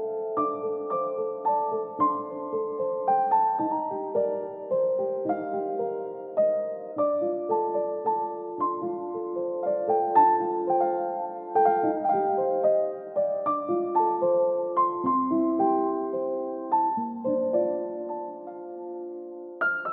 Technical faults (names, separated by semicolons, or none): none